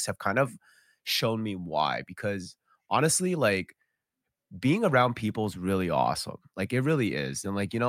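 Nothing technical stands out in this speech recording; there's no fault here to point to.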